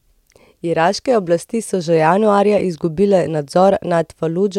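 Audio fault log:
Nothing to flag in this one, since the speech comes through without any technical trouble that I can hear.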